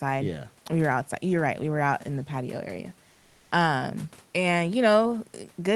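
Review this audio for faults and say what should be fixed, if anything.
Comfort noise in place of the background, 3.11 to 3.51 s: for 400 ms the room's natural background gives way to a smooth, featureless hiss about 1 dB quieter. This is likely because the sender's discontinuous transmission (Opus DTX) stopped sending audio during a pause, and the receiver synthesised filler noise in its place. Turning off DTX on the sending side, or keeping its voice detector from treating quiet background as silence, would prevent it.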